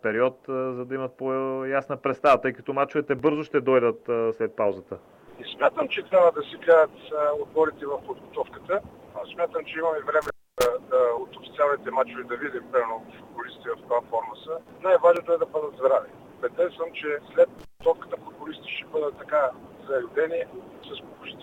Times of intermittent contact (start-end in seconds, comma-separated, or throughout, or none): 10.22-10.66, 17.59-17.85